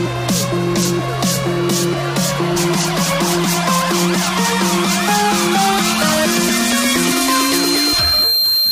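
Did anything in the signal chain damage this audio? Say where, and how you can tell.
Yes. At 2.56 s and again at 7.11 s there is a brief blip, each under 20 ms. This is damaged data in a compressed stream at the codec or storage stage: corrupted bytes make the decoder misread a frame, lose sync and hunt for the next valid frame header.

From 6.95 s to the end, a 4.2 kHz tone swells over about a second and a half until it sits at roughly the level of the program sound. That is loudspeaker feedback squeal, arising in the analogue acoustic path. A microphone hears the loudspeaker it drives, and at 4.2 kHz the loop gain exceeds unity, so that one frequency keeps reinforcing itself and is never brought down before the audio ends.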